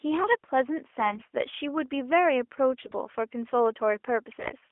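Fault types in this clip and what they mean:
AMR bit errors: Three short bursts, near 1.0, 2.8 and 4.4 s, where the speech keeps its pitch and level but turns hoarse, scratchy and gargly, roughest in the last two. Flipped low-priority bits in the mobile codec's frames misplace excitation pulses and skew fine pitch, gain and spectral values.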